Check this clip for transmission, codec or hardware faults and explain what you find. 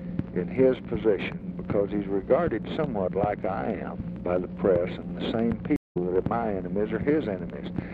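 One fault stands out: a stream reconnect from 5.76 to 5.97 s. The sound drops out for 165 ms and then resumes about a fifth of a second further on, skipping material. The connection broke, the player reconnected, and a fresh decoder restarted mid-stream at a later point.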